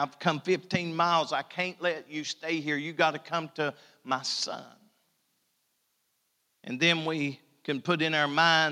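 No technical faults can be heard anywhere in the speech recording, and the signal holds steady throughout without any audible disturbance.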